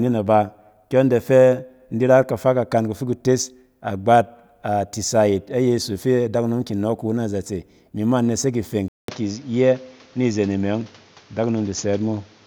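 At 8.88 s the waveform goes flat for 200 ms. The speech then returns duller at the same level, over a new background noise roughly 30 dB down. The spectrogram is cut off flat at 7.2 kHz. The likely cause is the input switching to a poorer device.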